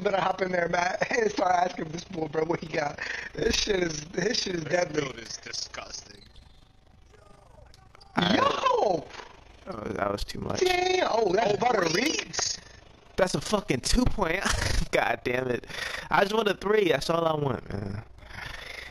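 From start to finish the audio carries overlap-add ripple: frames were rejoined with overlapping windows whose gains do not sum evenly, so the level dips by about 11 dB once per frame, around 30 times a second, heard as a rough flutter.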